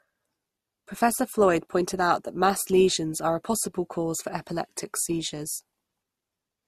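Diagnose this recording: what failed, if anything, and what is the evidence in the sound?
The codec stage failed. Across the whole speech clip the spectrum stops dead at about 13.9 kHz, and two distinct kinds of lossy artefact sit together. That mix is most likely transcoding between lossy codecs, with a low-bitrate Opus-style encode re-encoded to MP3 at a modest rate. The second encoder spends bits reproducing the first one's damage, and the lowest band limit in the chain carries through.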